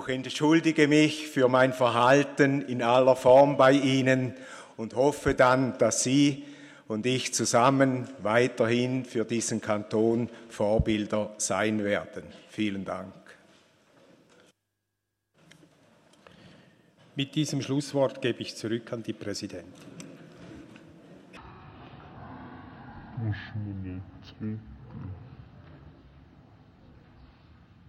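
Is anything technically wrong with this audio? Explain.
Yes. From 21.37 s to the end at 27.89 s, stereo read as mono: interleaved left and right samples play back-to-back as one channel, so the audio runs at half speed, an octave low, with a faint mirrored copy filling the spectrogram's upper half.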